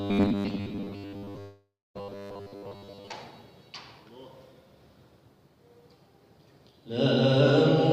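From 0.01 to 3.12 s the sound turns into a rigid, metallic 100 Hz buzz. This robotic sound from repeated short buffers likely comes from 10 ms chunks looping over most of the audio. From 1.41 to 1.97 s a fading buzz ends in about 0.23 s of silence, a long network dropout that likely lost 0.54 s of audio.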